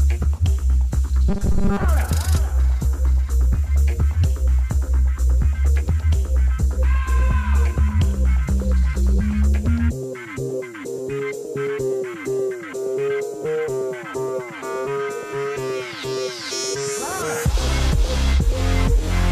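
From 1.29 to 1.84 s the sound turns into a rigid, metallic robotic buzz at 200 Hz, likely from repeated short buffers of about 5 ms. On a spectrogram, evenly spaced horizontal harmonics appear, and the waveform shows a short cycle copied through most of that stretch.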